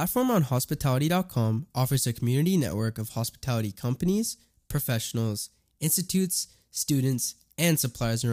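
Nothing in this recording stands out as a technical fault; the speech just carries on without any glitch, dropout or break to point to.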